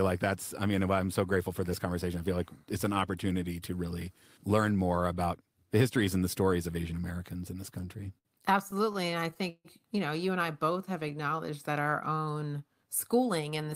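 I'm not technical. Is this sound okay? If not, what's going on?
No. From 7.69 to 8.27 s and again from 8.71 to 9.67 s the speech catches and hiccups, about five times in the first stretch and eight in the second, each time briefly holding the last sound before moving on. These are repeated stalls (stutter): the data carrying the audio kept arriving late, so the player ran out and stretched what it had to bridge each wait, the longest about 0.16 s. Nothing is lost, but it drags.

From 10.73 to 12.20 s the speech plays slightly slow, at about 90% speed, with drawn-out sounds but no drop in pitch. This is a jitter buffer slow-down: the player's small reserve of incoming audio was running low, so it repeated tiny slices of the speech to rebuild it, adding about 0.15 s in total.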